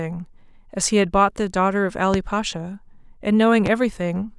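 It's a short speech clip with two loud pops on top of it, one at 2.14–2.18 s and a second at 3.66–3.70 s, each a single sharp thump while the speech carries on underneath. The first hits roughly 15 dB above the speech, the second a bit softer at around 10 dB. A pop like this is likely a sudden voltage spike from a plug, switch or static discharge getting into the signal path.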